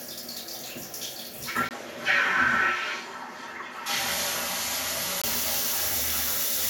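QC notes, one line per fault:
1.69–5.24 s, input switched to a poorer device: the input likely changed to a narrower-band device. After a brief 20 ms gap, nothing is left above 13 kHz and a faint new noise floor sits roughly 40 dB down. The level holds steady while the top end dulls until 5.24 s.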